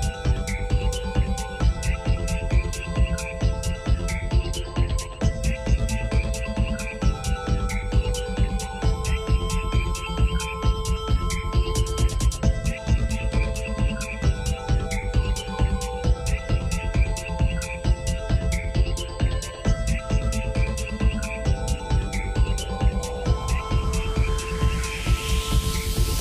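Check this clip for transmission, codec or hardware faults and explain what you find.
One hardware fault runs through the clip. USB whine throughout: the bus's 125-microsecond microframe current leaks into the audio path, giving a steady 8 kHz tone roughly 30 dB below the signal.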